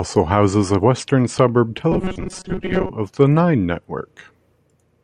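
A speech clip in which, right after "houses a western suburb", the sound from 1.92 to 2.90 s collapses into robotic sound from repeated short buffers: a hard metallic buzz at 188 Hz that still roughly tracks the syllables. The likely cause is audio arriving too late, so playback loops a slice of about 5.3 ms, and around seven tenths of that stretch is repeated material rather than new sound. A spectrogram would show rigid harmonics stacked on 188 Hz, and the waveform would show a short cycle repeating roughly across much of the interval.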